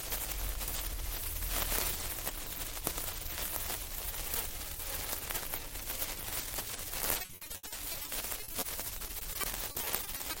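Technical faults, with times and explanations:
7.21–10.35 s, repeated packet loss (robotic sound): nearly thirty holes up to 70 ms, each patched by extending the last sound, giving choppy audio with pieces missing.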